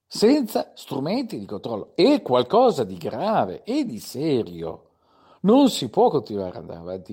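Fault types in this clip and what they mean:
No faults detected in this speech recording; nothing to report.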